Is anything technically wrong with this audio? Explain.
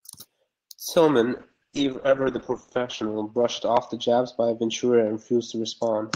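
Yes. From 1.35 s to the end there is a call bitrate drop. A falling bandwidth estimate starved the encoder, cutting it from 32 to 8 kbps, which it stays at for 1.4 s, and narrowing its bandwidth from 20 kHz to 8 kHz. The speech turns coarse and muffled. A spectrogram shows energy above 8 kHz gone.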